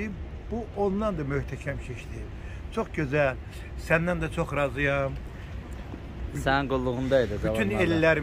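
No technical faults are audible.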